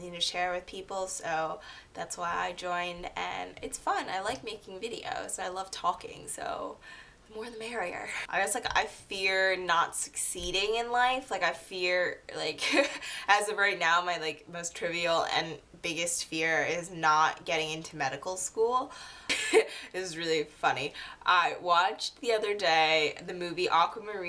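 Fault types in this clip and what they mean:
No fault types are present in this clip.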